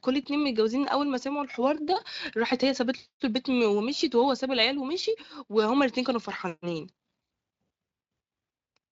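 No technical faults can be heard in this speech recording. It has passed through the Speex codec with at most faint coding damage, and the band stops at about 7.7 kHz, with nothing audible above that.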